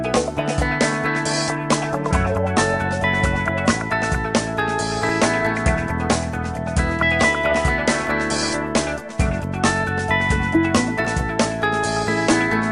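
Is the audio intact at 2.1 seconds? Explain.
No: at 2.11 s there is audio missing between chunks, likely from closing one 3-second chunk and opening the next. Roughly 20 ms drops out, heard as a skip.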